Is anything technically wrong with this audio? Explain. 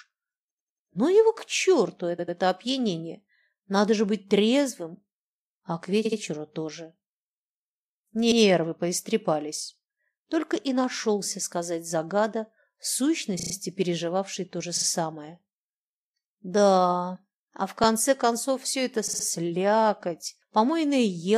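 Yes. The speech stutters eight times, at 0.50–0.87, 2.18–2.37, 6.04–6.18, 8.31–8.41, 13.38–13.52, 14.76–14.85, 17.84 and 19.06–19.24 s. A short slice of sound, between 12 and 93 ms long, plays again one to four times in a row. These are repeated frames: a run of compressed frames was written or sent more than once, so the decoder plays the same audio again, lengthening the clip by 12 to 372 ms each time.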